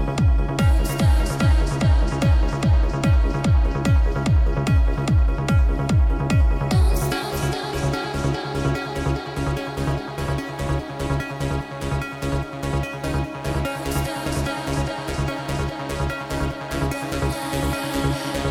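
Nothing stood out as a technical problem on listening.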